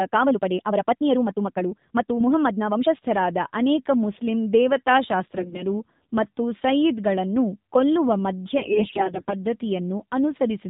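The whole clip passes through the AMR narrowband mobile codec, and the damage is plainly audible. Everything above 4 kHz is gone, so the speech sounds boxed-in and telephone-like. The vocal-tract model is driven by only a few pulses per subframe, which gives the voice a buzzy, synthetic edge. That level of coarseness points to one of the lower AMR-NB modes, consistent with about 7.4 kbps.

From 0.0 to 2.88 s the speech runs at about 1.63 times its normal pace, yet the pitch does not rise. Delivery is rushed, and the pace changes abruptly when this stretch ends. The likely cause is a time-stretched section, where software compressed the audio to fit a length and kept the pitch by dropping short pieces.

Two bursts of AMR bit errors follow. The first runs from 5.37 to 5.63 s, just before "ಮತ್ತು ಸಯ್ಯಿದ್ ಗಳನ್ನು". The second, longer one runs from 8.57 to 9.35 s. In both, the voice keeps roughly its pitch and level but turns hoarse, scratchy and gargly. 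This happens because flipped low-priority bits misplace the excitation pulses and skew the finer gain and spectral values, while the protected core bits still pass their check. The corruption is dense, around one bit in ten. Its extent suggests about a dozen 20 ms frames in the first burst and nearly forty in the second.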